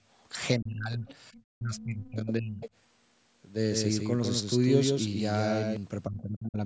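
Right at the start, around 0.2 to 0.24 s, there's a very faint scrap of the other side's voice leaking through. It's most likely loudspeaker echo that the canceller didn't fully strip out of the mic. It's buried well below the talker, so you'd barely catch it.

From 0.58 to 1.07 s the speech gets suppressed in double talk. The talker's level sinks by roughly 25 dB for about half a second. The likely cause is the echo canceller hearing both sides at once and ducking everything.

Right as that releases, the leak comes back from 1.06 to 1.41 s, clearly louder this time, roughly 25 dB under the speech. It's a second voice sitting behind the talker.

Then it all piles up. From 1.55 to 2.62 s the talker is pulled down again, about 25 dB at worst, for around a second. Overlapping that, from 1.76 to 2.7 s, the other side bleeds through much more clearly, only about 15 dB below the speech. So you get a squashed, patchy talker with a distinct foreign voice over the top. 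That's the classic likely result of a canceller losing track during crosstalk.

Last one, 6.07 to 6.59 s, is another double-talk suppression. It's roughly 25 dB of ducking over about half a second. The band tops out at 8 kHz from the call's mic processing, which is expected.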